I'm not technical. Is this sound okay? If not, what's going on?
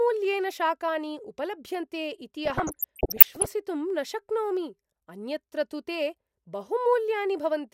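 No. DAB burbling from 2.45 to 3.46 s: weak digital radio reception let errors slip past the receiver's correction into the audio data, so individual frequency bands briefly jump in level, giving a bubbling, squelchy, chirping sound over the speech.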